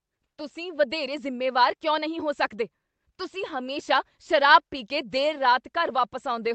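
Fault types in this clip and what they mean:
Clock drift between sender and receiver: throughout the clip, the sender's clock runs slow by roughly one and a half percent. The receiver's jitter buffer keeps draining, so it must keep filling gaps, leaving small, unevenly spaced timing hiccups in the band-limited Opus call sound.
Repeated timing corrections: from 0.18 to 6.34 s, the receiver repeatedly stretches short slices to keep pace with the slow sender. This plays the audio at 98% speed and adds around a tenth of a second overall, heard, if at all, as slight hiccups or an unsteady tempo.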